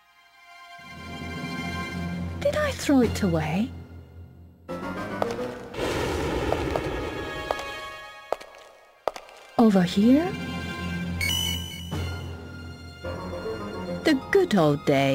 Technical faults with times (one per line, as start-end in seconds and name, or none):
none